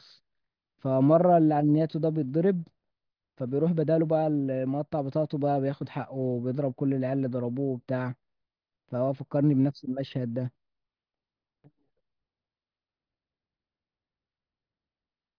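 No technical faults are audible.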